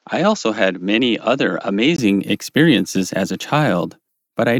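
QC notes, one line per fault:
0.00–1.98 s, input switched to a poorer device: nothing above 7.6 kHz, about 5 dB quieter, its own noise floor; a 20 ms gap before "experiences as a" likely marks the switch, unlike a plain filter.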